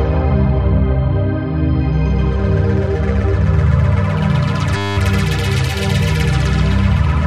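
From 4.77 to 4.97 s, a system hang loop repeats one 10 ms slice about 20 times, producing a steady 100 Hz buzz while the hardware cycles a stalled ring buffer.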